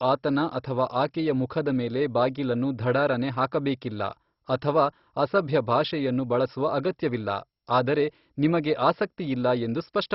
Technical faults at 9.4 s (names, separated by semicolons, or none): MP2 compression